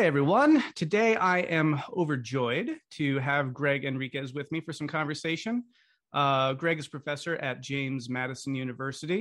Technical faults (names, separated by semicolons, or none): none